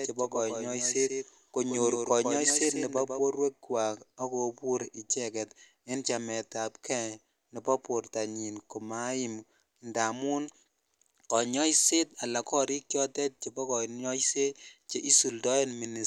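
From the start to 3.2 s the speech carries a doubled audio track: an undecayed, roomless copy trails about 150 ms behind, roughly 5 dB down, likely a second capture path, then cuts off abruptly, unlike a natural echo.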